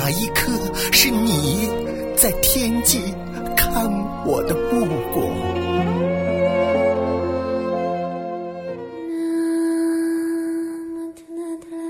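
From 0.12 s to 11.86 s a faint, evenly spaced ticking runs under the sound, roughly every 70 ms, so it blurs into a soft rattle. It comes through most clearly on loud, bright or sustained passages and disappears in quiet gaps. These are clock slip clicks, likely from two devices running on separate, unsynchronised clocks a few hundred parts per million apart. The steady rhythm fits a single sample being dropped or repeated each time the drift adds up to a whole sample.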